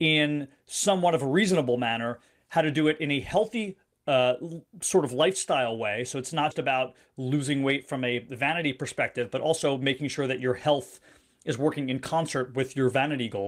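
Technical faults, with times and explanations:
6.51 s, skip ahead: about a fifth of a second of audio was dropped while later audio was already queued, so playback jumps straight across the gap with no silence.
8.47 to 9.85 s, jitter buffer speed-up: an overfull jitter buffer trimmed short pitch-period slices, removing roughly 70 ms, so the speech runs about 5% faster at unchanged pitch and sounds slightly hurried.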